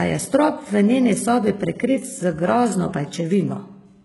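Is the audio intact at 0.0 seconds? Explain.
No. From the very start and throughout, the speech has likely passed through HE-AAC compression at a very low bitrate, around 12 kbps. The upper band is rebuilt by copying lower bands upward, so the treble is not the original, nothing survives above 11.5 kHz, and s sounds turn gritty and metallic.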